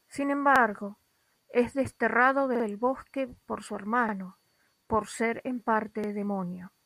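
Four times, new audio failed to arrive in time and the device replayed its last 46 ms piece, which fits a 2048-sample buffer. Each repeated buffer causes a brief stutter with hard joins at 0.56, 2.55 (played twice more), 4.09 and 6.04 s.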